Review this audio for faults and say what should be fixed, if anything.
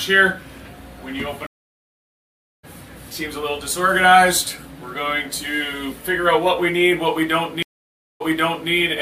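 Two stream reconnects here. At 1.47 s the connection drops, about 1.2 s of silence follows, and when a fresh decoder picks up at 2.65 s the sound jumps ahead by roughly 0.7 s, so that stretch is just gone. The second, from 7.63 to 8.71 s, has about 0.58 s of silence, then resumes 0.51 s earlier as the server resends a burst, so you hear that bit twice. Both restarts fade in on the first frame. A bigger client buffer and reconnect logic that resumes from a tracked stream position would stop both the gaps and the jumps.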